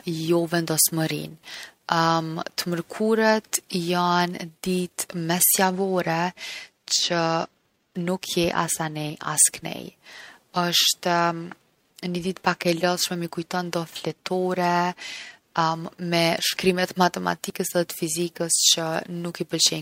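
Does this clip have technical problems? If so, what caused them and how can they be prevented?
Yes. At 9.1 s and 17.5 s the speech jumps forward by roughly 20 ms, likely a dropped buffer (overrun): audio arrived before the program read it and was overwritten. Unlike a dropout, no silence appears. Larger buffers or higher capture-thread priority prevent it.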